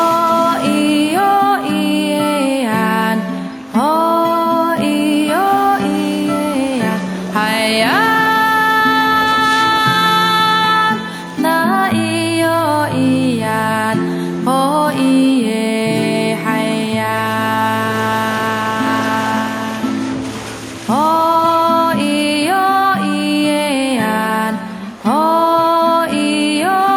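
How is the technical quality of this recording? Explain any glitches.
No glitches can be heard anywhere in this recording, and there is nothing to explain.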